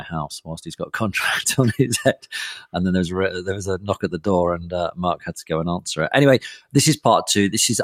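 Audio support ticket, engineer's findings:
Noise suppressor applied to music or sounds, throughout: speech-tuned suppression treating sustained tones and tails as noise, pulling them down by around 5 dB while attacks pass, causing audible pumping and thinning.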